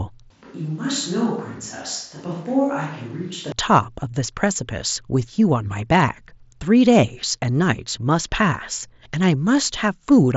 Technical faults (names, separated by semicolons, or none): switch to a distant microphone